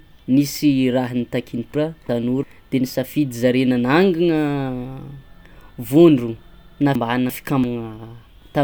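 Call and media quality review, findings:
Frames out of order at 1.75–2.43 s and again at 6.95–7.64 s. Garbled flutter in the speech. Two adjacent runs of about 0.34 s each were decoded swapped, probably in jitter-buffer or packet-reorder handling. No audio lost, just shuffled.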